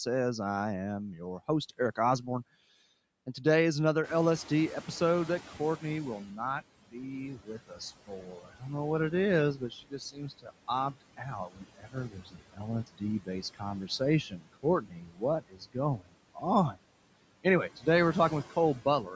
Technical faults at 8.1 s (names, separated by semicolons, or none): noise suppressor artifacts; speech cut by the noise suppressor